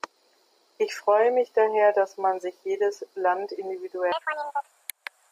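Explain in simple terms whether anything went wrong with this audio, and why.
From 4.12 s to the end at 5.32 s, the speech plays at the wrong speed, 1.74 times too fast. Pitch rises with the speed, by roughly ten semitones, so the voice turns high and hurried. The likely cause is this section being fitted to the wrong clock.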